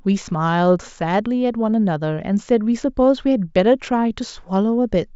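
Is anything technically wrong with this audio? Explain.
No, the signal shows no technical faults.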